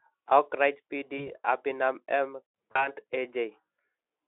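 At 1.17 s, VoIP packet loss concealed by the speech codec breaks into the narrowband speech. The gap fits one lost 20 ms frame. The decoder repeats its last pitch and filter at falling gain, so a brief buzzy or noisy smear replaces the sound. The weakness lingers until 1.33 s. At 2.71 s it happens again, matching about 40 ms lost. The smear is longer and fades further, and recovery runs to 2.88 s.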